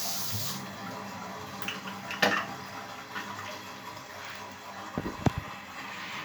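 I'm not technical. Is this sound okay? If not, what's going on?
Yes, the sound is fine; nothing here needs fixing.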